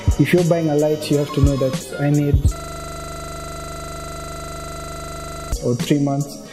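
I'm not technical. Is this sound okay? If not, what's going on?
No. From 2.56 to 5.52 seconds the sound stops moving forward and turns into a rapid rattle, about three seconds of the same tiny fragment repeating 25 times a second. This is a system hang loop: the computer or its audio driver froze, but the sound hardware kept replaying the last 40-millisecond slice it had been given, over and over, until the system recovered.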